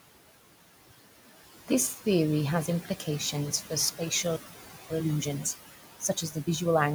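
A speech recording carries a residue of background noise throughout: the room noise, sitting about 13 dB below the voice, sinks in the pauses and swells back under each phrase. These are noise suppressor artifacts. The suppressor judges, frame by frame, which frequency bands hold steady noise and pulls them down by about 16 dB.

The same process causes speech cut by the noise suppressor in two places. Between 2.85 and 3.07 s, after "theory has" and before "for spatial", parts of the speech go faint and swallowed, dipping by up to about 9 dB over roughly a tenth of a second in total. From 6.00 to 6.48 s part of the speech loses up to about 13 dB, with roughly 150 ms of it affected. In both places the suppressor mistook low-level speech detail for noise and turned it down along with the background.

After "for spatial", the audio stops dead at 4.36 s and stays silent until 4.90 s, a gap of about 540 ms. 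This playback stall was likely caused by the player running out of buffered data or its output thread being held up.

Time-compressed catch-up follows immediately. From 4.90 to 6.84 s the speech runs hurried, at about 1.25 times normal speed with its pitch unchanged. To work off the backlog from the stall, the player cuts out small slices and cross-fades the remaining pieces together.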